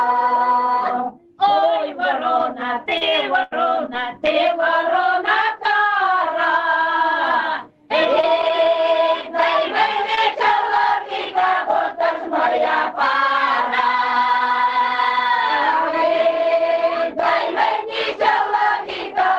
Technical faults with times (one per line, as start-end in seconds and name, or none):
2.97-3.03 short concealed packet loss
3.01-3.03 lost packet rebuilt from error correction
3.43-3.53 burst of packet loss
3.51-3.53 lost packet rebuilt from error correction
3.93-3.95 lost packet rebuilt from error correction
8.21-8.25 short concealed packet loss
8.23-8.67 lost packet rebuilt from error correction
10.15-10.19 short concealed packet loss
10.17 lost packet rebuilt from error correction